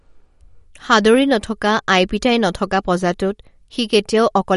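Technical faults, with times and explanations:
Throughout, MP3 compression: the spectrogram stops at a hard ceiling at 11.2 kHz, and codec damage is plainly audible, likely from encoding at around 48 kbps.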